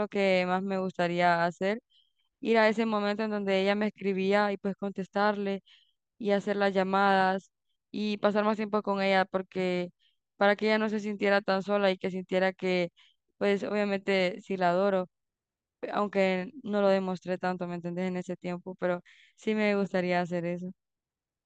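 Speech recording, with no technical faults to be heard anywhere in it.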